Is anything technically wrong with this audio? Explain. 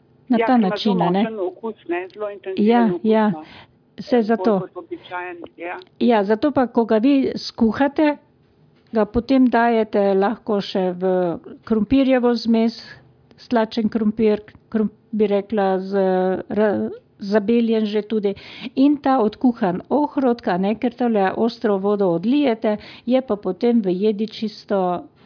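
No, nothing technically wrong can be heard here.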